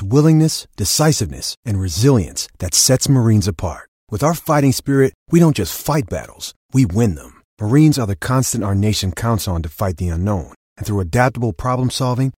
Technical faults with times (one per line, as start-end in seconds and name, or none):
none